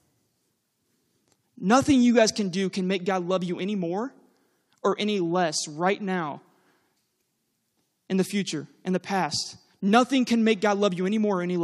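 No technical faults can be heard anywhere in the recording.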